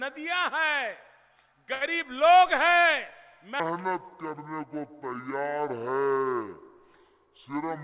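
Audio coming through a narrowband call path, with nothing above 4 kHz, which fits G.711 at 64 kbps. At 1.74 to 1.83 s there's a short stall from a late packet: the jitter buffer ran dry and the last sound was held for about 68 ms before the audio carried on, with nothing actually lost. From 3.60 s to the end there's a section at the wrong speed, running at 0.605 times normal, so everything drops about ten semitones and drags, likely from a player or editor running it against the wrong clock.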